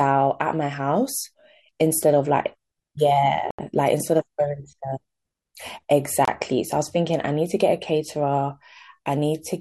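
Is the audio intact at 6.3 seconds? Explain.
No. From 6.25 to 6.28 s the speech cuts to about 25 ms of clean silence, then picks up again: a Bluetooth stall, likely from interference delaying packets until the receiver's buffer ran dry.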